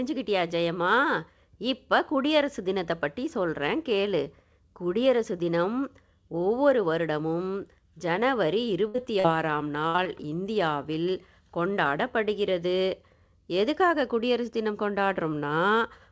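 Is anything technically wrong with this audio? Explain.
Yes. The speech has dropouts from lost packets, clustered between 8.9 and 10.1 s.

Burst of packet loss at 8.88–8.96 s and again at 9.88–9.96 s: each time about 60 ms of audio in a row failed to arrive in time. The receiver kept extending the last sound it had and turned it down across the gap, so a held buzz or fading hiss stands where the real audio should be. The speech then resumes, with that stretch gone.

Short concealed packet loss at 8.96–9.00 s, 9.20–9.26 s, 9.96–10.00 s and 10.04–10.07 s: smaller holes of about 20 ms, and 40 ms at 9.20 s, never reached the decoder in time. Each was patched by continuing the preceding sound, from its pitch when voiced and as shaped noise otherwise, then blended back into the real signal. These are heard as brief smears or wobbles, and a short consonant can vanish. Two follow directly on the bursts, stretching the damage. 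The audio passed through a call path whose codec sound points to G.722 at 64 kbps, with nothing above 8 kHz.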